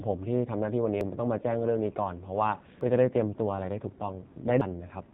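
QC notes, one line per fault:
Throughout: AMR narrowband mobile codec. The speech has the thin, boxed-in sound of a 2G/3G call, with nothing above about 3.8 kHz. The codec models the voice as a vocal-tract filter driven by a few pulses per frame, and at this heavy level of damage that model turns buzzy and synthetic. The coarse reconstruction points to one of the low AMR-NB modes, around 6.7 kbps.
1.01 s, 2.81 s, 4.61 s: audio missing between chunks. At each point roughly a fifth of a second vanishes, and the sound on either side is butted together with no gap of silence, so it jumps forward abruptly. The skips repeat every 1.8 s. This is likely a recorder working in 2 s blocks and dropping a slice at each handover.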